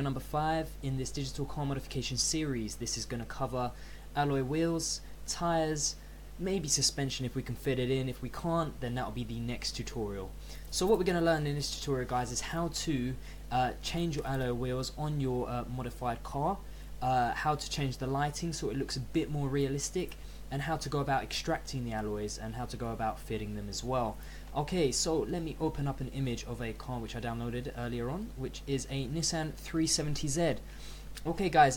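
A steady low drone at 50 Hz sits under the audio from start to finish, with some low harmonics above it and only about 10 dB below the signal. This mains hum comes from power-line current leaking in through a ground loop or a nearby transformer.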